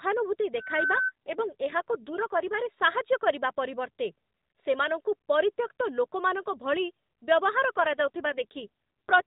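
From 0.56 to 1.12 s a single whistling tone near 1.5 kHz swells over about a third of a second until it sits roughly as loud as the speech. This is loudspeaker feedback squeal: a microphone hears its own loudspeaker, and the loop gain at that frequency passes one.

From 1.26 to 2.56 s, and again from 7.78 to 9.22 s, the speech turns rougher and more synthetic with no gap or change of band. These are AMR rate drops. The light coding of the surrounding narrowband call points to 12.2 kbps, and the degradation fits a switch down to about 5.9 kbps.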